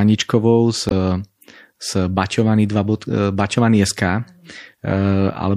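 Throughout the speech, the encoder appears to have been short of bits, likely from MP3 compression at a low rate, which fits something near 64 kbps. The treble is cut off and weak frequency detail flickers between frames, giving a plainly audible watery, swirling texture with metallic edges on sibilants.

From 0.88 to 0.93 s, damaged data in a compressed stream throws the decoder off: it misreads the corrupted frames, loses sync and hunts for the next valid header. The result is a brief glitch.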